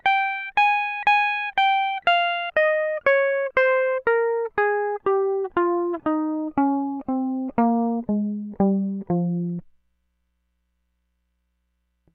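No technical faults can be heard.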